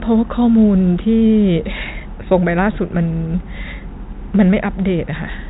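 No technical faults occur in the speech, which comes through a telephone-band channel with nothing above 3.8 kHz.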